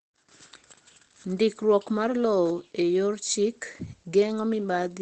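Throughout, Opus voice compression removes everything above 8.6 kHz and codes the excitation coarsely, leaving the speech plainly muffled and hoarse, which fits SILK at about 12 kbps.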